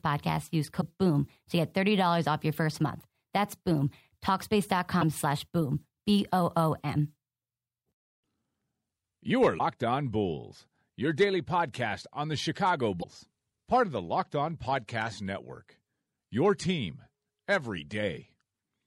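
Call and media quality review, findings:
Damaged data in a compressed stream. Four short glitches in the speech, each about 55 ms: 0.77–0.83 s, 4.98–5.03 s, 9.55–9.60 s, 13.00–13.05 s. Probable component: decoder input, the stored file or the incoming stream. Corrupted bytes make the decoder misread those frames. It loses frame sync. It outputs garbage until it locks onto the next valid frame header.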